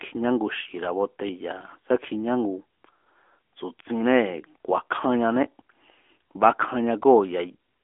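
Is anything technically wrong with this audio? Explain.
Yes, it's been through an AMR narrowband mobile codec the whole way. The phone-line band runs 250 Hz to 3.4 kHz with nothing above 3.6 kHz, and the buzzy synthetic edge from modelling the voice as pulses fits roughly 10 kbps.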